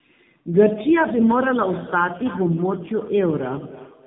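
Speech carrying two faults. Tandem speech coding runs throughout: the audio sounds rougher and more warbly than a single narrowband call, which points to AMR-NB coding applied twice, with nothing above 3.8 kHz. From 1.03 s to the end there is feedback echo between two devices. Discrete copies return at a steady interval of roughly 300 ms, peaking about 15 dB below the speech and growing thinner and more ringing. That fixed spacing is what separates it from diffuse room reverberation.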